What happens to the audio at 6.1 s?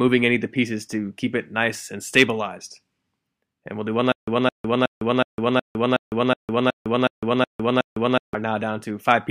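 At 6.1 s the audio is in the middle of a stutter with silent gaps running from 4.12 to 8.34 s: the same 214 ms burst repeats every 369 ms with 155 ms of digital silence between, likely a stalled stream replaying its last fragment. The waveform shows identical blocks separated by flat silent gaps, which appear as evenly spaced blank vertical strips on a spectrogram.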